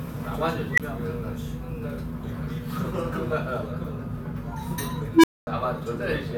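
An unstable filter, a recursive stage running away from bad coefficients, fires twice. At 0.72 s a tone near 2 kHz swells over 60 ms into a squeal, clips, and drops out for 21 ms. At 5.14 s a tone around 300 Hz builds over 99 ms, then falls silent for 235 ms until the filter resets.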